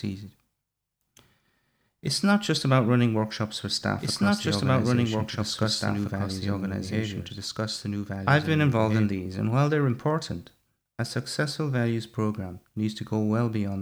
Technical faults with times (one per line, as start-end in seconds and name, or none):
4.00-9.06 doubled audio track